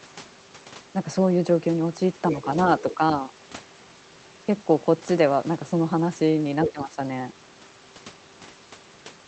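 At 6.65 s a second voice cuts in for a brief moment, lasting until 6.72 s. It sits only a few decibels below the talker, so it is clearly audible as a separate speaker rather than a faint ghost. This is the other side's voice leaking through, likely because the far end's audio was playing from a loudspeaker and the echo canceller failed to strip all of it out of the microphone signal.

Immediately afterwards, from 6.72 s to 6.98 s, the talker's own voice sags and breaks up. The level dips by as much as roughly 15 dB, and the loss adds up to around a fifth of a second, so the speech sounds briefly muffled and patchy. This is speech suppressed in double talk, likely caused by the echo canceller being unable to separate the talker from the overlapping loudspeaker echo and attenuating both together.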